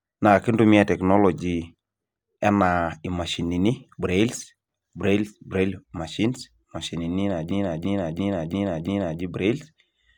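Speech clip with a system hang loop from 7.51 to 9.22 s, right after "braille machines imashinini". A 341 ms piece repeats exactly five times at about 2.9 Hz, which fits a driver freeze replaying a 16384-sample ring buffer.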